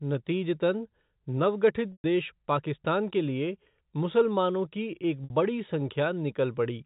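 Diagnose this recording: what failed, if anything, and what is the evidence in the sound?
Packet loss with pitch repetition, a network-stage fault, occurs at 1.92 to 2.04 s, just after "नतीजतन नवगठित", and at 5.24 to 5.30 s, after "लिए मुसलमानों की एक". Gaps of 120 ms and 60 ms went missing, which fits runs of 20 ms packets. The receiver filled each gap by looping the last pitch period: the shorter one sounds like a brief buzzy hold, and the longer one fades toward silence before speech cross-fades back. The G.711 telephone band carries through unchanged.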